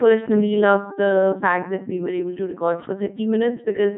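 From the very start the voice sounds robotic and buzzy, as if assembled from hums rather than recorded, with a hard ceiling leaving nothing above 3.8 kHz. This is the Codec 2 vocoder at work, and the heavy damage fits its 3.2 kbit/s mode. Instead of preserving the waveform, it transmits only pitch, voicing, energy and a coarse spectral envelope, and the decoder rebuilds the speech from sine waves. Fine detail and natural texture are lost throughout.

From 0.57 s to the end, the sound turns duller and more muffled, as though heard through cloth. De-emphasis has been applied wrongly: a treble-cutting filter meant to reverse pre-emphasis was used on audio that had no boost to undo, or was applied twice. The result is a smooth downward tilt toward the high end, about 13 dB lower at 10 kHz than at 1 kHz, which takes away what little brightness the codec left.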